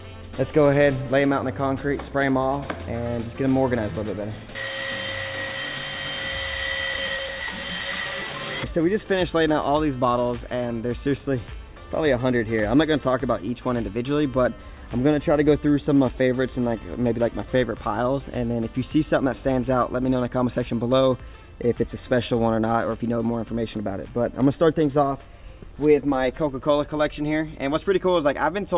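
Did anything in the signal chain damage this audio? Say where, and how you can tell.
No, the signal chain shows no audible damage at any stage, from capture through to playback.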